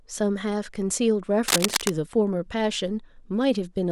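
From 1.48 to 1.90 s, a dense, ragged scratching and rustling sits over the speech, roughly as loud as the speech itself. It is cable scratch noise, most likely from a worn cable, connector or control being moved. As the metal contact shifts, its resistance jumps about rapidly, and those irregular changes add uneven bursts of noise to the signal for the short time the part is disturbed.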